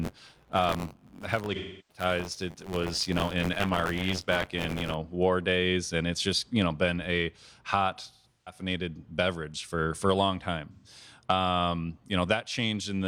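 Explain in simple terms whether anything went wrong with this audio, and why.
Two things went wrong. For the first 4.94 seconds there's buffer tearing: the playback side and the program feeding it drifted out of step, so each 512-sample chunk carries a small slice of sound from a split second earlier. That repeating seam makes a steady robotic buzz around 94 Hz under the speech.

There's also AAC frame loss with concealment. Chunks of the compressed stream went missing and the decoder guessed at the gaps from what came just before, so you get smeared, watery patches at 1.54–2.03 s, 8.11–8.61 s (a scattered run of drops) and 10.72–10.88 s.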